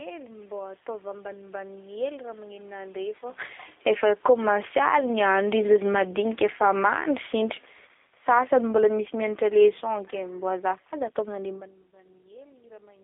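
The G.729 codec colours the whole clip. It rebuilds the speech at 8 kbit/s from a filter model and a few pulses per frame. The line passes only about 300 Hz to 3.6 kHz. The speech sounds thin, rough and plainly synthetic throughout.

Around 3 s the talker moves relative to the microphone, which is a natural level change. Then automatic gain falling begins at 3.71 s. The gain control judges the input too loud and eases down by about 11 dB until 4.96 s. Voice and room noise sink together.

Automatic gain rising overlaps it from 4.38 s to 6.08 s. The control now hears too little and lifts the gain by about 6 dB. The level swells back gradually, background included.

A second, longer automatic gain fall runs from 5.72 s to 11.55 s, dropping about 13 dB. The speech and its background fade slowly across those six seconds. A brief automatic gain rise of about 3 dB, from 8.38 s to 8.92 s, interrupts the fall with a small swell. 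Near 11.5 s the talker moves again, a real change at the microphone rather than a fault.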